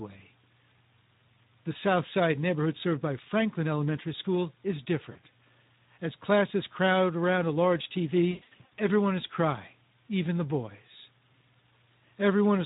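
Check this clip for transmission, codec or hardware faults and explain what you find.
Two faults are present: low-bitrate codec coding across the whole recording, and two episodes of concealed packet loss.

Speex codec, throughout: this CELP coder spends too few bits on the excitation signal, so the speech comes out hoarse and noisy with plainly audible coding damage. The degree of roughness fits a rate of around 11 kbps.

VoIP packet loss concealed by the speech codec, at 5.11–5.19 s and 8.31–8.72 s: missing packets were filled by extending the last pitch and filter with falling gain. About 40 ms is lost in the first episode and about 280 ms in the second, scattered between "crowd around a large" and "everyone is crying even", leaving buzzy or noise-like, fading, smeared speech that recovers slowly.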